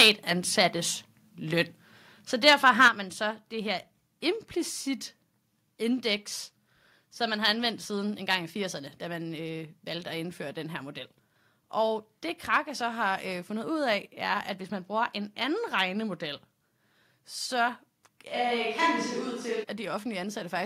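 From the very start to 0.1 s the loudest sound breaks up into a harsh crackle, most likely microphone overload, with the input driven about 7 dB past the converter's limit. Several percent of samples are cut flat. On a waveform the peaks show as squared-off plateaus. A spectrogram shows a smear of broadband energy rising vertically through the high kHz range at each flattened peak.

A second, milder microphone overload runs from 2.47 to 2.88 s, about 4 dB over, with a couple of percent of samples clipped. The crackle is lighter but has the same gritty edge. The waveform shows shorter flat tops and the spectrogram shows thinner vertical streaks of distortion.

Right at 2.88 s, just as that distorted passage ends, the microphone volume steps down by about 7 dB. Both the voice and the background drop together at once, a likely automatic gain reduction by the call software reacting to the clipping. 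On a waveform the envelope shrinks in a single clean step. A spectrogram shows every band dimming at the same instant, with no fade.

From 18.3 to 19.62 s there is a switch to a distant microphone. The voice turns hollow and roomy, losing its close low end, with little change in overall level. That points to a likely loss of the close microphone and a fallback to one further away. Room noise stays well below the speech but rises into view. A spectrogram shows weaker low frequencies, reverberant tails smearing each syllable and a raised noise floor, all beginning and ending abruptly.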